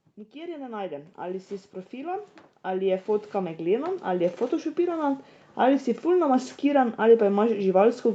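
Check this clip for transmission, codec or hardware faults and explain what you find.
One fault stands out, in the level rather than the codec. From 0.14 s to 5.68 s there is automatic gain rising. The gain control judged the incoming speech too quiet and kept raising its gain over those five and a half seconds, by about 19 dB in total. Because the gain is applied to everything the microphone picks up, the speech and the background noise swell together. The speech starts faint and ends much louder, and the room sound climbs along with it. The audio also carries nothing above 8 kHz, which fits the call path's Opus codec running at wideband, and that band limit is normal for a call.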